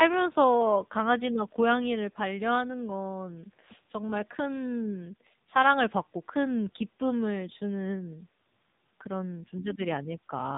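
From start to finish the speech carries heavy AMR narrowband mobile codec damage. Nothing reaches above about 3.8 kHz, so sibilants and consonant edges are dulled to a boxed-in telephone band. The codec rebuilds each 20 ms frame from a vocal-tract model excited by a few pulses, and at the low rate heard here, which fits roughly 6.7 kbps, that excitation is coarse. The result is a buzzy, synthetic timbre.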